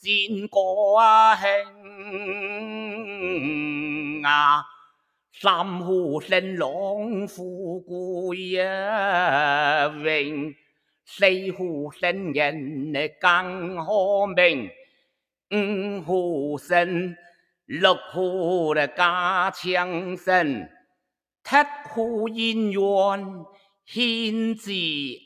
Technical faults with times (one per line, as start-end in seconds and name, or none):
0.00-25.25 noise suppressor applied to music or sounds
1.64-3.22 sound cut by the noise suppressor
4.67-5.11 sound cut by the noise suppressor
10.54-10.90 sound cut by the noise suppressor
14.73-15.11 sound cut by the noise suppressor
17.17-17.45 sound cut by the noise suppressor
20.69-20.94 sound cut by the noise suppressor